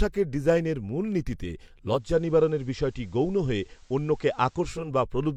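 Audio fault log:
1.84–4.95 s digital radio blending to analogue: after "ডিজাইনের মূলনীতিতে" the digital signal dropped and the receiver cross-faded over 0.38 s to FM, adding faint hiss.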